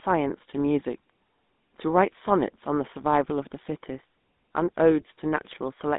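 GSM full-rate codec damage runs through the whole speech clip. The sound is held between roughly 200 Hz and 3.7 kHz, and a buzzy, gravelly roughness is plainly audible. It comes from pulse-excited vocal-tract modelling consistent with a 13 kbps coder.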